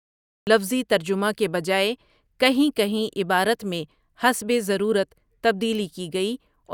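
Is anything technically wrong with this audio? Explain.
Yes. The speech has a cut-off start. From 0 to 0.47 s there is only digital silence, and at 0.47 s the audio begins abruptly in the middle of a sound rather than at its onset. The capture or stream engaged late, so the opening of the utterance was never recorded. There is no natural attack or fade-in: the signal jumps from nothing to full level, and the first syllable is clipped short.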